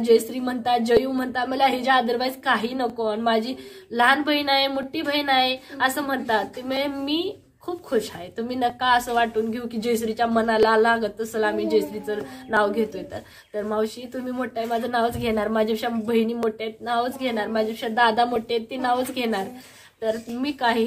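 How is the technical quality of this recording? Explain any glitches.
The recording has one recurring fault. Clock drift buffer slips run from 0.97 to 20.29 s, a regular click about every 1.93 s, roughly ten in all. The likely cause is two devices whose clocks differ by a few hundred ppm, so the buffer between them periodically drops or repeats a small block of samples, a few tens each time. Each slip lands as a brief pop in the sound.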